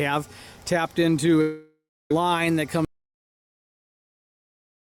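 At 1.41 s the sound stops arriving and smears into a fading buzz. Near-silence follows until 2.11 s. This is likely a long network dropout, with about 0.7 s lost.

At 2.85 s the sound cuts to silence, with no room tone, through to the end. This is likely an audio dropout to silence.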